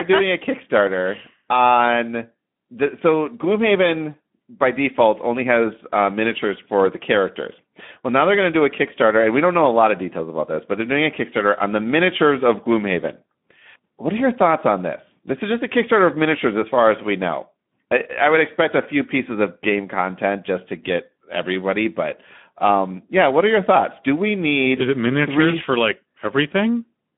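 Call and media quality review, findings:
Speex codec damage throughout, plainly audible: speech noisy and hoarse, band limited to 150 Hz to 3.5 kHz. CELP encoder too short of bits for the excitation, consistent with a setting near 11 kbps. Probable component: legacy VoIP/chat codec.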